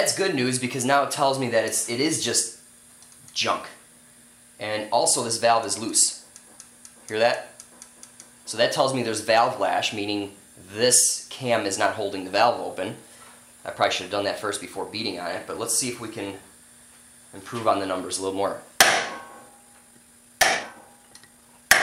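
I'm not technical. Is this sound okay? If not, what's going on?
No, not quite. From about 19.47 s to the end at 21.82 s there's a time-stretched section: the sound suddenly runs about 1.45 times faster while the pitch stays where it was, so it comes across rushed. What's likely going on is that software squeezed that last stretch to fit a set length, keeping the pitch steady by cutting out tiny slices of sound as it went.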